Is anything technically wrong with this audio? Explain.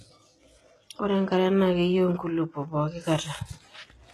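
Yes. Throughout the speech there is plainly audible codec damage, likely HE-AAC compression. Nothing sounds above 12.3 kHz. The treble is rebuilt from copied lower bands, so s sounds turn gritty and lispy. The damage fits a bitrate near 16 kbps.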